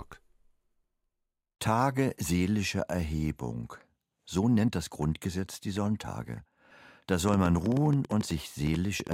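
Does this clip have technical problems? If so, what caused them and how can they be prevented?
Yes. From 7.29 s to 9.13 s there is a train of clicks, roughly 15 of them at about 8.2 per second, spaced unevenly. They sound like sharp ticks or pops riding over the sound. They peak about 10 dB above it. The clicks share much the same shape. That points to one repeating source injecting short pulses, likely electrical interference from nearby equipment or a faulty connection or power supply. Keep cables away from noisy devices and use a stable, well-powered interface.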